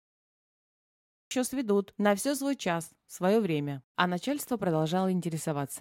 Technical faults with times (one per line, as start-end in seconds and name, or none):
0.00-1.31 cut-off start